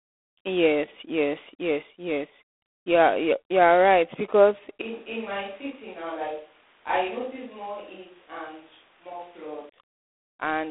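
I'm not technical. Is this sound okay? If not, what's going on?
No. Throughout the clip, the audio has passed through G.726 ADPCM, a telephone codec that saves space by sending only a rough guess of how each tiny slice of sound differs from the last. Here it uses very few bits per slice, so its guesses are coarse. You hear a harsh, rasping hiss riding on the speech, getting louder when the speech does, and a narrow phone-line tone with nothing above about 3.8 kHz.

From 4.82 s to 9.69 s, the recording likely switched to a distant microphone, perhaps because the close one dropped out. The sound changes abruptly: it becomes hollow and roomy, loses its low, full body, and turns somewhat quieter. Background room noise also becomes noticeably more present. At 9.69 s it jumps back just as suddenly to the closer, fuller sound.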